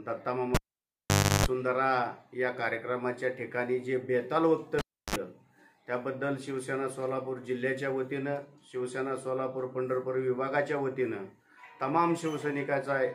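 Cable pulled and plugged in, at 0.55–1.46 s and 4.79–5.16 s: a live lead is yanked and reinserted, giving a pop, near silence, a 50 Hz buzz (335 ms, then 55 ms) as the tip touches, and a second pop.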